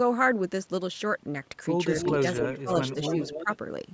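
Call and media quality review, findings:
Echo leak, 1.92–2.57 s: delayed copy of the speech returning about 277 ms late, only about 5 dB under the direct signal. Likely an echo canceller on a loudspeaker endpoint passing residual pickup back into the call.
Echo leak, 2.91–3.57 s: same 278 ms delay, weaker, about 10 dB down. The fixed delay and discrete repeat set it apart from room reverb, which smears into a decay rather than repeating.

Speech suppressed in double talk, 2.39–2.7 s: near-end level ducks by roughly 15 dB, about 0.2 s affected in total, during overlap with the echo leak. Likely the echo canceller's suppressor misreading local speech as echo.
Speech suppressed in double talk, 2.95–3.15 s and 3.38–3.48 s: shallower dips, around 5 dB, under the second echo. Unlike packet-loss dropouts, the level sags rather than cutting to silence, and only while the echo overlaps.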